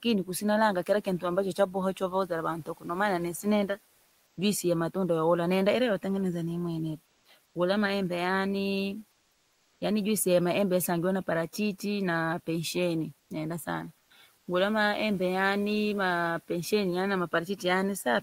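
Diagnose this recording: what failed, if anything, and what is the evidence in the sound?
Call processing: speech cut by the noise suppressor at 1.57–1.75, 1.94–2.31 and 2.57–2.89 s, just before "sinenda juisi ya matunda". Speech is turned down by about 10 to 12 dB rather than silenced, so the syllables sound swallowed, not dropped like a packet loss.

Codec: comfort noise in place of the background at 7.05–7.25, 7.45–7.55, 9.11–9.81, 13.19–13.30, 13.98–14.10 and 14.37–14.47 s, likely Opus DTX. The room noise, about 27 dB below speech, gives way in pauses to steadier, featureless noise up to about 6 dB quieter.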